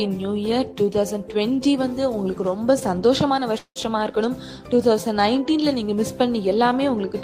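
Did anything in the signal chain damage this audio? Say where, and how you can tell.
Yes, at the network stage: a call audio freeze from 3.58 to 3.78 s. The last sound stretches into a fading buzz, then drops to near silence (about 80 ms), likely from delayed packets draining the jitter buffer. On a spectrogram, smeared horizontal bands fade into a blank gap; nothing is lost, so everything after arrives about 178 ms late.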